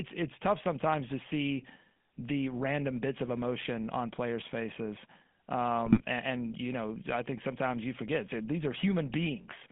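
Throughout, the speech carries plainly audible GSM full-rate codec damage, a buzzy, gravelly roughness from the codec's pulse-driven vocal-tract model, which fits a 13 kbps GSM full-rate link. The band runs only from about 150 Hz to 3.5 kHz, so the top end is missing.

From 5.86 to 6.02 s, GSM bit errors break the speech into squawks, pops and gargling. Corrupted filter, pitch or gain values reached the decoder, distorting the spectrum or level in each affected frame. The length of the burst points to a handful of damaged frames.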